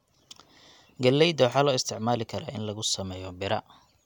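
Speech recording with no technical faults to be heard.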